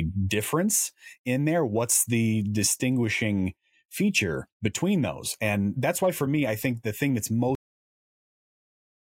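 The final stretch of buffers was never written out, giving a cut-off end at 7.55 s: right after "think the thing that's" the speech halts mid-sound and falls straight into digital silence with no decay, staying silent for the remaining 1.6 s.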